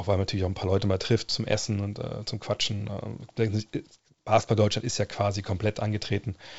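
No technical faults are audible in this speech.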